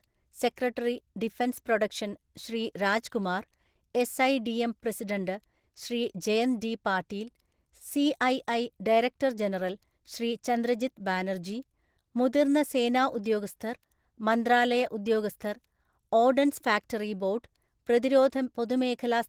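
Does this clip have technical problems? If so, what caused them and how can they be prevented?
Yes. Audible Opus compression damage runs through the whole speech clip, most likely from encoding at a low bitrate; the sound fits roughly 16 kbps. At that rate the encoder works in hybrid mode, coding the lower band with its speech-oriented SILK layer and the upper band with CELT, which gives the audio a muffled, hoarse quality. The full frequency range is retained, but the codec damage is plainly audible for the entire duration. To prevent it, encode speech with Opus at a higher bitrate, or keep a lossless master and make low-rate copies only for delivery.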